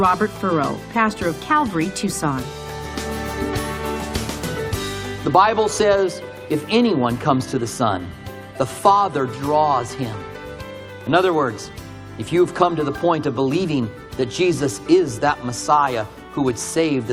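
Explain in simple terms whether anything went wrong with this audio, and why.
Nothing went wrong here.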